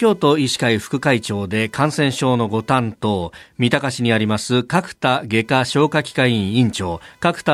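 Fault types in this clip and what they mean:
Computer activity noise: changing load on the computer's processor, graphics card or mouse shifts the ground that the audio circuit shares with them, and that shifting current leaks into the signal path. Throughout this speech clip it comes through as a faint buzzing, pulsing at a rate of around 500 Hz and sitting roughly 40 dB below the speech. It rises and falls with what the machine is doing rather than following the talking.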